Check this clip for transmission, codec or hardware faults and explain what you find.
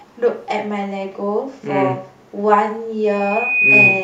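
Two faults are present in this speech clip: an echo leak at the start and a loudspeaker feedback squeal at the end.

From 0.0 to 0.2 s, a faint delayed copy of the speech arrives about 0.5 s late, roughly 30 dB below the direct sound. The likely cause is an echo leak. A far-end echo canceller failed to fully remove loudspeaker pickup, so some of it was sent back.

From 3.03 s to the end at 4.03 s, a loudspeaker feedback squeal appears. A microphone is hearing the loudspeaker it feeds. At 2.5 kHz the loop gain exceeds one. The tone swells over roughly 0.7 s to about 10 dB above the speech.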